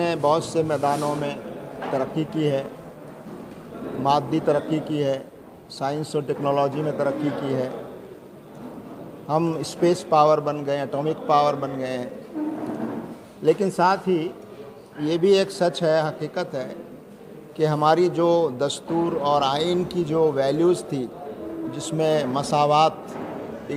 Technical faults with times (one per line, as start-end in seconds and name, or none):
none